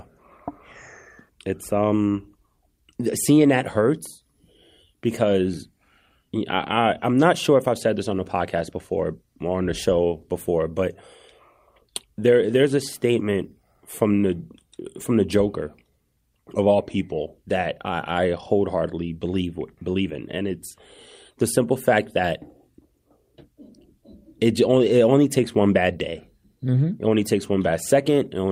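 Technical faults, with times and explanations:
Nothing stood out on listening to this speech recording.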